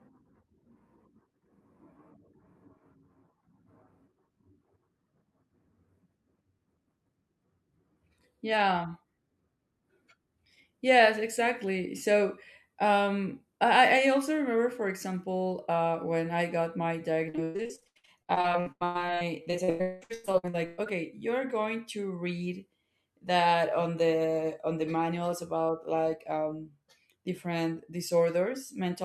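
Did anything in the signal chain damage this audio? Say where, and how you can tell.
Yes, the damage happened at the network stage. From 17.29 to 20.88 s the speech breaks into choppy fragments. This is repeated packet loss (robotic sound). Across that stretch, 38 separate gaps occurred. The receiver concealed each one by extending the preceding sound, so about 48% of the span, roughly 1.7 s, is synthetic fill rather than real audio. The longest hole reaches 199 ms. The gaps come too close together for concealment to recover between them, which produces the robotic texture.

A jitter buffer slow-down follows at the receiver's playout buffer, from 20.12 to 21.2 s, overlapping the end of the loss burst. Pitch holds steady, but the audio runs at about 96% speed, and syllables sound slightly stretched. Running low or having just raised its target delay, the buffer rebuilt its reserve by repeating single pitch periods and pause fragments, adding 50 ms of playout time over that second.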